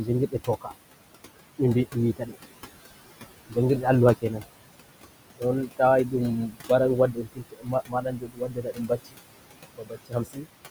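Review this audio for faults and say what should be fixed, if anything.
Noise suppressor artifacts run through the whole recording. The suppressor is pulling whatever it judges to be steady background down by about 19 dB, frame by frame. The room noise, which sits about 13 dB under the speech, ends up pumping: it drops away in the gaps and surges back under each phrase. To prevent it, back off the suppression depth and slow its release so the floor stays steady instead of gating.

Speech cut by the noise suppressor turns up eight times, at 0.05 to 0.71 s, 1.93 to 2.37 s, 3.48 to 3.84 s, 4.22 to 4.44 s, 5.36 to 6.14 s, 6.48 to 6.70 s, 7.12 to 9.20 s and 9.71 to 10.46 s. The suppressor mistakes quieter parts of the speech for noise and turns them down with the background, by about 11 dB at the mildest and about 22 dB at the worst. Those bits sound swallowed. The 7.12 to 9.20 s stretch is the worst, with well over a second of it dulled. 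To prevent it, raise the speech-detection sensitivity or lower the suppression strength so soft speech isn't classed as noise.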